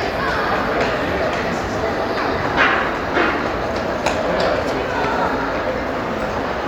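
No technical faults can be heard anywhere in this recording of sound. Nothing in it points to a dropout, distortion or any other failure along the playback chain.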